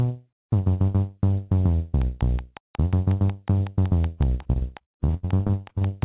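The audio carries a train of clicks starting at 2.02 s and running to the end, at a steady 5.5 clicks per second with even spacing and peaks a few decibels above the signal. The pulses share the same shape and remain audible through quieter moments as a regular ticking laid over the material. Such a fixed-rate, uniform pulse pattern is likely interference coupled from nearby equipment or an interface that is dropping out periodically. From 4.42 s to 5.83 s there is also repeated packet loss with a robotic sound. The stream breaks into many short holes, the longest about 63 ms. Each hole is filled by extending the last received fragment, and about 37% of that stretch is patched this way. The rapid alternation of real and synthesized segments gives a choppy texture with pieces missing, made busier by the clicks still running underneath. The path itself is a G.711 mu-law call link at 64 kbps, which is why nothing sits above 4 kHz.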